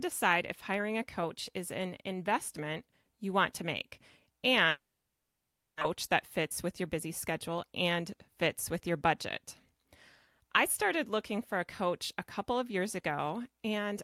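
From 4.69 to 5.83 s, a long network dropout likely cuts the speech. A brief fading buzz gives way to about one second of silence. About a second of speech is lost.

From 6.43 to 7.94 s, a jitter buffer speed-up plays speech 5% fast at unchanged pitch. It trims roughly 70 ms and sounds hurried before "fits with your budget".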